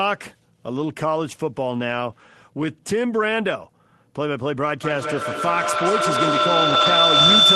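From 4.83 s to the end, feedback howl takes over: the call loops through a nearby device and builds into a whine near 4 kHz, pulsing about every fifth of a second and peaking about 9 dB over the speech. Between 6.69 and 6.87 s, inside that howl, there's a lost packet rebuilt from error correction. About 100 ms of audio was played from low-bitrate backup copies, so there's no gap, just a rougher, noisier patch.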